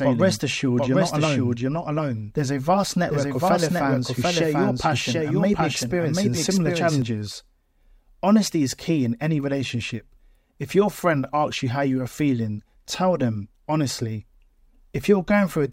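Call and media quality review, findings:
Doubled audio track, 0.0–7.02 s: the speech repeats about 0.7 s late at roughly equal level, clean and dry, then cuts off abruptly. Likely second capture path or misaligned edit.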